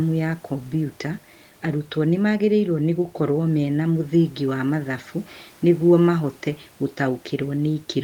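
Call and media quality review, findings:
No system faults found; room noise about 33 dB below speech.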